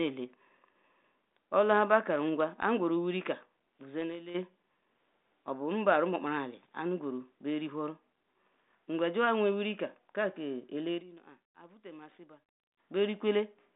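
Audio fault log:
2.89–4.44 s and 10.60–12.95 s, loudspeaker feedback squeal: first after "ba karu nkwa", a pure 4.7 kHz tone swells over about a second and a half (later, under half a second) to roughly 10 dB above speech, as the microphone–speaker loop gain exceeds one there. On a spectrogram it is a brightening horizontal line, and on the waveform a ballooning envelope.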